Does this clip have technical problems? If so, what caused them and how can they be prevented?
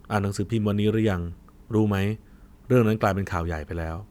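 No, no technical faults here.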